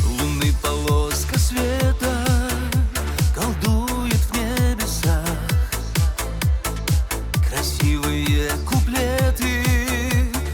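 No technical faults can be heard anywhere in the signal.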